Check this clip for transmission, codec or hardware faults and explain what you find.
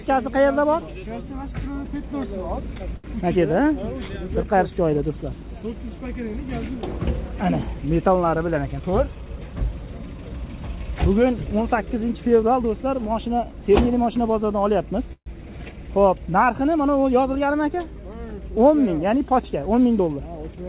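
Five network-related faults are audible, all from late or bunched packets. No sound reaches above 4 kHz, which fits a narrowband G.711 mu-law call path.

Short stall from a late packet, 2.96 to 3.06 s: a sound hangs on for about 78 ms with a faint buzzy texture, then carries on where it left off. A packet arrived late and the jitter buffer ran dry, so the receiver stretched the last sound until the packet came in.

Call audio freeze, 15.13 to 15.28 s: the sound turns into a fading buzz and then about 80 ms of silence, roughly 134 ms in all, before resuming with nothing lost. This is likely packets held up in transit that emptied the jitter buffer, leaving the receiver to fill the wait.

Jitter buffer speed-up, three times: 8.56 to 9.17 s at 110% speed, 17.26 to 17.86 s at 107%, and 19.99 to 20.57 s at 110%. Each passage sounds rushed but keeps its pitch. A backlog of delayed packets arrived together, and the receiver trimmed tiny pitch-period slices to catch up, cutting roughly 70, 50 and 70 ms respectively.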